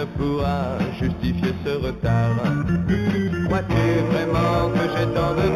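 Throughout the clip there is imaging from linear upsampling. The content stops near 4 kHz, which fits a source at 8 kHz raised to 44.1 kHz by straight-line interpolation between samples. That weak filter lets a mirrored copy of the spectrum through in the 4 kHz to 8 kHz band, around 30 dB below the signal. The real top end sounds dulled, with a faint metallic shimmer sitting above it on bright, sharp sounds.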